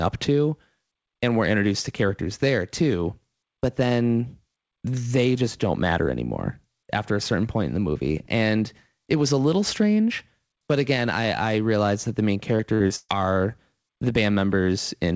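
From 12.56 to 13.11 s there is repeated packet loss, giving a robotic sound. Four gaps, the longest 131 ms, are patched by stretching earlier sound. The result is choppy, with pieces missing. The call-codec band limit, with nothing above 8 kHz, is present throughout.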